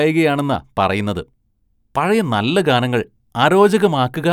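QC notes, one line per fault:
Nothing to flag on this speech clip; there's no fault to log here.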